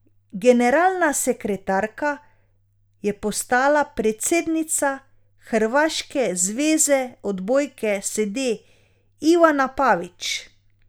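No technical faults are audible anywhere in the recording.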